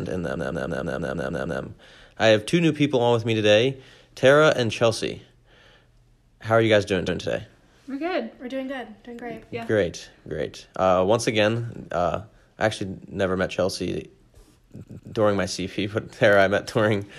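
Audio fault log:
0.35–1.61 s, repeated frames: a roughly 157 ms chunk loops eight extra times right before "I have two new", so it stutters and adds about 1.25 s.
7.07–7.20 s, repeated frames: after "are you guys doing", a 131 ms block plays once more, giving a single skip-back.
14.83–15.14 s, repeated frames: a 157 ms block runs twice more before "during my", a short double stutter adding about 0.31 s.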